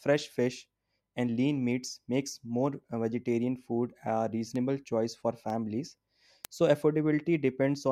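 Speech with word clock ticks: about seven sharp, uneven clicks roughly once per second from 0.77 to 7.40 s. The receiver's unlocked clock drifts about 20 ppm, slipping one sample each time. These show as thin vertical spectrogram lines and tiny waveform discontinuities.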